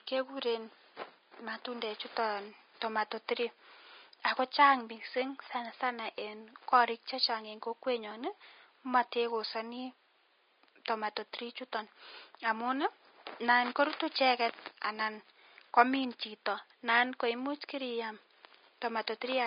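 From start to end, the speech carries Vorbis compression damage, likely at a bitrate around 25 kbps. The treble is coded too coarsely, so fine detail turns into noise. It sounds hissy and grainy. Room noise sits about 40 dB below the speech.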